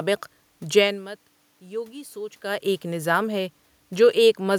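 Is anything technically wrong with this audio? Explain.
No, nothing technically wrong: the room noise and the level shifts around 1 s and 2.5 s, where the talker moves relative to the microphone, belong to the recording itself and not to any fault in the signal chain.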